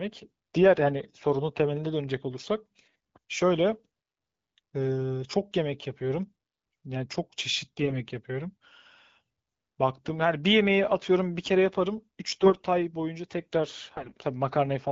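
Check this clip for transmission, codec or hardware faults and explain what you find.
There is one transmission fault, recurring three times in this speech clip, carried over AMR wideband (HD Voice) coding whose clarity fits the 12.65 kbit/s mode.

AMR bit errors at 7.77–7.94 s, 12.27–12.66 s and 13.95–14.18 s: weakly protected frame bits arrived flipped, misplacing excitation pulses and skewing pitch, gain and spectral values. Pitch and level hold, but the voice turns hoarse and gargly, worst in the later two bursts.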